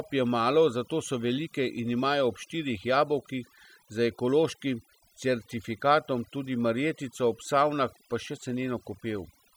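From start to finish the speech carries overdone noise removal. A noise reduction stage set far too aggressively is pulling individual frequency bands down, or out entirely, whenever they sit close to its noise estimate, and the quieter components of the voice get caught with them. The gaps between phrases collapse to near silence dotted with twinkling, chirpy specks, while the voice itself has its softer detail stripped away.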